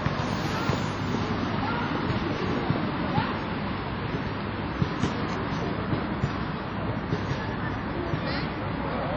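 Everyday sounds run through the whole clip with a ringing, washy smear and hiss that swells and fades with the signal, likely from WMA compression at a heavy setting fitting roughly 32 kbps. A spectrogram shows blocky, zeroed gaps between components, smeared onsets, and nothing above 19.8 kHz.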